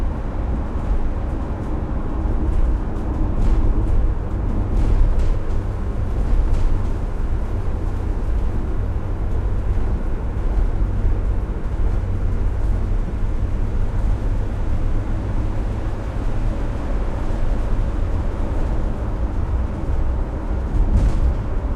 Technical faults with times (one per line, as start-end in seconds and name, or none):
0.00-21.75 doubled audio track
13.08-13.12 corrupt frame decoded